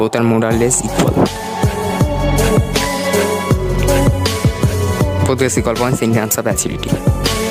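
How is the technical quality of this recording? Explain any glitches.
The recording has one clear technical problem. Gain pumping runs throughout: the input gain is likely set far too high, so a fast limiter clamps down on each loud sound, swinging the gain by roughly 20 dB, leaving everything squashed.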